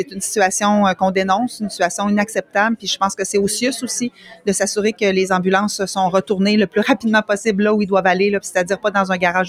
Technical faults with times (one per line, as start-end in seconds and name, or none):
0.00-9.49 noise suppressor applied to music or sounds
0.04-0.22 sound cut by the noise suppressor
2.39-2.56 sound cut by the noise suppressor
4.10-4.47 sound cut by the noise suppressor